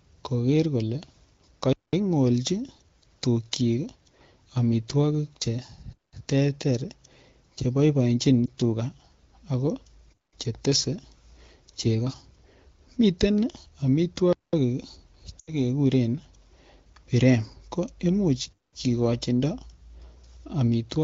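Hard-edged holes of silence, each 200 ms long, cut into the speech at 1.73, 5.93, 10.13, 14.33 and 18.53 s. They repeat every 4.2 s. This is a gap between chunks: audio arriving in 4-second blocks with dead air inserted at each join.

At 8.46 to 8.51 s there is a brief dip and warble, and from 15.39 to 15.56 s the sound drops to near silence before returning weak. These are lost AMR speech frames. The decoder patched one missing 20 ms frame, then a run of about 80 ms, by repeating the last good frame at falling gain. The AMR wideband (HD Voice) coding underneath shows only light damage.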